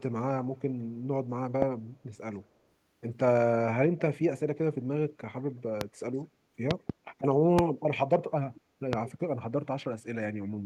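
Loud pops strike at 1.62 s, 5.81 s, a double between 6.71 and 6.92 s, and 7.59 s. Each is a sharp click well above the speech. A likely cause is an electrical glitch. From 8.55 to 8.61 s, a brief, very faint echo leak returns the speech about 204 ms late. Another pop follows at 8.93 s.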